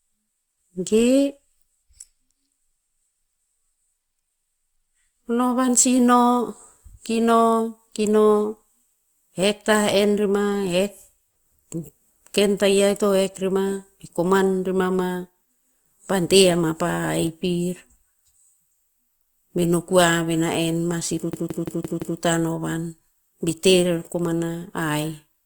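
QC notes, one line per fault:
21.33–22.19 s, system hang loop: right after "na en ma si", one 0.17 s slice of the speech replays identically five times, giving a machine-gun stutter at about 5.9 repeats per second. This fits an 8192-sample ring buffer that the hardware kept cycling while the driver stalled. Unlike a dropout or packet-loss concealment, each repeat is an exact copy with no fade, gap or smearing, and the speech resumes with essentially nothing missing.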